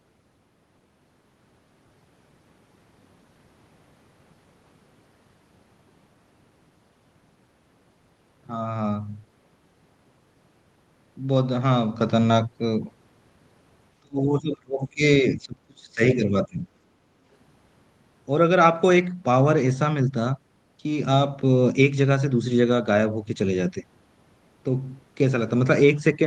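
A speech recording carried over a call link whose audio tops out near 12 kHz, which fits a super-wideband Opus stream at roughly 24 kbps. From 14.02 to 15.02 s the voice sinks sharply, by around 35 dB at its deepest. It comes back briefly, then drops again from 15.22 to 16.68 s, by around 30 dB. This is speech suppressed in double talk, likely caused by the echo canceller. While the far side was also talking, it could not tell the near voice from loudspeaker echo. So it pulled the whole microphone signal down. Shortly after, from 16.98 to 17.17 s, the room sound dips by about 6 dB and then recovers. This is background gated by the echo canceller. The canceller clamped the microphone while the loudspeaker played and let go a moment later.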